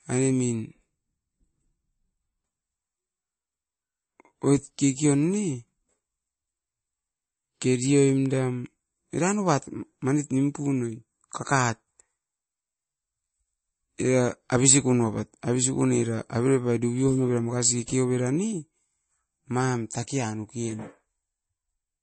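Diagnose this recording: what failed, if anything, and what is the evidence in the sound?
The failure sits at the codec stage, and the likely cause is MP3 compression. The damage is plainly audible across the whole speech clip. Nothing is present above 8.4 kHz. The encoder cut the treble at that fixed point to save bits. Weak frequency lines drop in and out between frames, giving a watery, swirling texture. S sounds turn metallic and consonant attacks smear. The extent of the damage fits a low bitrate of about 32 kbps.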